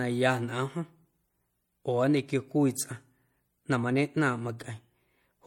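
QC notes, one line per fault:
Throughout, transcoding between lossy codecs: the speech carries two layers of compression damage at once. There are the artefacts of one coder, plus a second coder's own artefacts laid over them, with nothing present above 18.4 kHz. The likely cause is an MP3 encode near 64 kbit/s later re-encoded as HE-AAC near 40 kbit/s. The second codec wasted bits reproducing the first one's artefacts and added its own, so both coexist.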